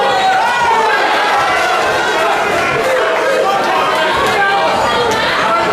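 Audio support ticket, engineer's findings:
Chunks out of order, 3.58–3.62 s and 4.92–4.96 s: 20 ms block played one slot late, swapped with its successor. Brief jumble with three hard joins each. Suspect buffer queue ordering.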